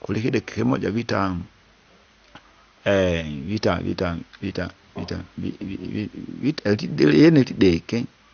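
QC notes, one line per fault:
Throughout: MP2 compression, likely; speech is dull with gurgling, granular distortion and nothing above 6.5 kHz, as upper sub-bands drop out, fitting roughly 48 kbps.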